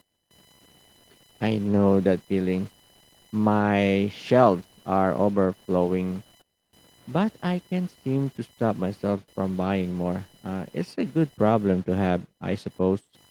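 Right from the start and running the whole way through the speech, there's computer activity noise sitting underneath: a thin buzzy chirp pulsing at around a thousand times a second, roughly 35 dB below the speech. What's going on is that the processor or graphics load is shifting the shared ground of the audio circuit, so the interference tracks the machine's activity rather than anything in the sound. The light Opus hybrid coding at 20 kbps carries that buzz along with the rest.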